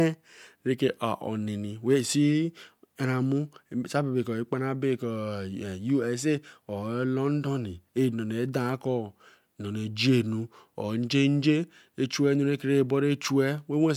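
Speech recording with no audible technical faults anywhere.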